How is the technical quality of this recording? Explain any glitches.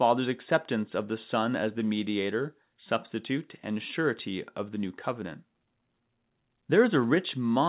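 No glitches: the speech has the narrowband sound of a call path, with the lowest bass trimmed by the microphone processing and nothing above 4 kHz, which points to a G.711 A-law telephone codec, and neither counts as a fault.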